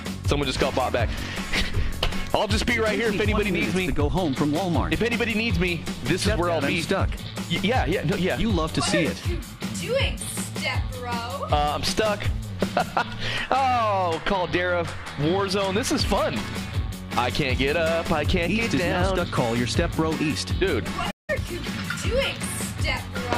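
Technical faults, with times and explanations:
21.10–21.30 s, playback stall: the sound drops out for about 175 ms mid-flow, likely the player starving for data or its thread getting blocked, then picks back up.
21.30–21.46 s, time-compressed catch-up: right after the gap the audio rushes at 2x, same pitch, as small slices are cut and cross-faded to clear the backlog.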